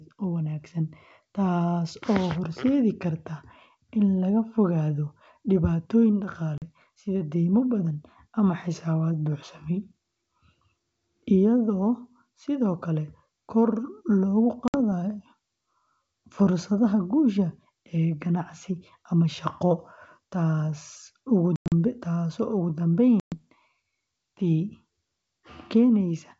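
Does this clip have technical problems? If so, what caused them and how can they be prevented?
Yes. Packet loss on an ADPCM call leaves abrupt silent holes at 6.58 to 6.63 s, 14.68 to 14.78 s, 21.56 to 21.73 s and 23.20 to 23.45 s. Each gap throws the decoder's adaptive predictor and step size out of step with the sender's. Speech then returns with a click, distortion or the wrong level, and settles within tens of milliseconds. Better network quality of service, loss concealment, and resynchronising the decoder state after a gap would prevent it.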